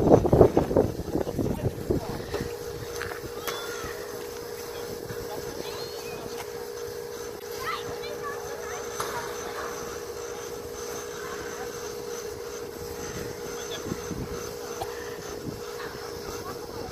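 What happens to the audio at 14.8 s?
Between 14.77 and 14.84 s there's damaged data in the compressed stream: the decoder misreads corrupted frames, loses sync and hunts for the next header, giving a short glitch.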